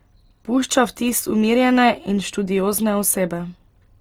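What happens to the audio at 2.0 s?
At 2.0 s the speech sounds grainy and rough, as it does through the whole clip, with highs still reaching about 20.1 kHz. The likely cause is Opus compression at a rate that fits about 24 kbps, where thin bands are filled with noise. That noise-filling gives roughness rather than MP3's swirling holes.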